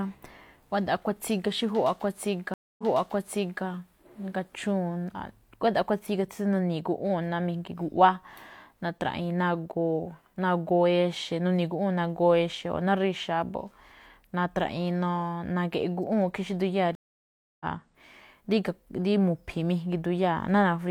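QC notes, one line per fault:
2.54–3.64 s, stream reconnect: the audio stops for about 250 ms, then comes back with a fresh decoder that fades in and resumes 0.85 s earlier, so that stretch plays twice as the server resends buffered audio. A plain dropout would resume where it stopped.
16.95–17.65 s, stream reconnect: a longer gap of about 650 ms, then the sound picks up roughly half a second later, skipping material the live stream moved past. The soft restart after the gap marks a new decoder, not a simple muted stretch.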